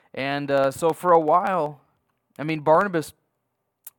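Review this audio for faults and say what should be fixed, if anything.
Periodic USB or driver dropouts run through the speech from 0.07 s to 3.90 s. A tiny slice of audio, a fraction of a millisecond, is skipped every 63.9 ms, about 16 times a second and around seventy times in all. Each joint leaves a small step in the waveform that is heard as a steady ticking under the speech. On a spectrogram these show as evenly spaced thin vertical broadband lines. To prevent this, find and stop the background task that is stalling the USB bus or audio driver, or record with a larger buffer.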